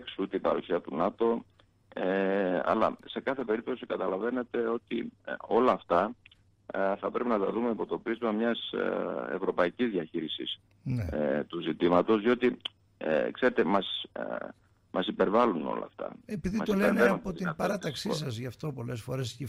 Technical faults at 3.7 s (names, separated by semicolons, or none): call bitrate drop